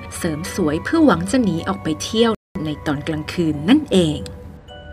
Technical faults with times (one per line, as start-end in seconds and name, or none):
2.35-2.55 rebuffering stall